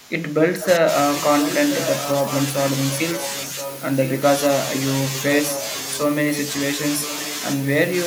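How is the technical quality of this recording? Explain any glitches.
The recording has two problems: a speech dip at the start and repeated echo later.

From 0.0 to 0.87 s, speech suppressed in double talk. The voice drops by up to about 15 dB, over about 0.7 s of that span. Both sides likely spoke at once. The echo canceller then turned the near talker down along with the echo.

Echo leak follows at 1.19–2.45, 2.92–4.2, 5.06–6.0, 6.31–6.51 and 7.02–7.69 s. A copy of the voice returns 1.02 s late, about 10 dB below the speech, and about 15 dB below in the last stretch. A loudspeaker's echo canceller likely failed to remove it.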